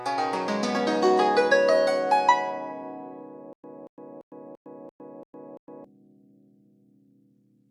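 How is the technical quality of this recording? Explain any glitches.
The recording has one clear glitch, a stutter with silent gaps in the music. It runs from 3.53 to 5.84 s. A fragment of about 232 ms plays, then about 108 ms of dead digital silence follows. The cycle repeats every 340 ms, seven times over. The likely cause is a stalled player or stream that replayed its last buffered fragment on each retry, then ran dry. The music meant for that stretch never plays.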